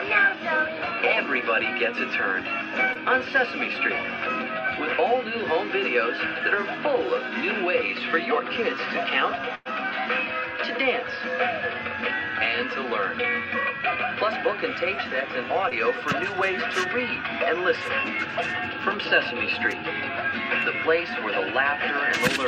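At 2.93 to 2.97 s and again at 15.69 to 15.73 s, short concealed packet loss drops about 20 ms of audio, which the receiver patches with roughly 16 ms extrapolated from the preceding sound. Each patch is heard as a brief smear or wobble. On a spectrogram, the harmonics or noise texture repeat unnaturally before rejoining the real signal.

From 9.55 to 9.67 s, a burst of packet loss removes about 100 ms. The receiver stretches the last sound across roughly 103 ms and fades it, leaving about 20 ms of silence before the audio resumes further on. The waveform shows a decaying envelope with a flat gap.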